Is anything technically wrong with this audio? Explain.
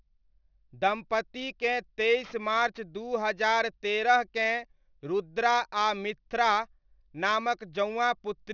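Yes, aliasing runs through the whole speech clip. The rate was apparently cut to around 12 kHz without an anti-alias filter, so content above the 6 kHz fold point mirrors down into wrong frequencies, roughly 25 dB under the speech, making sibilants gritty and metallic.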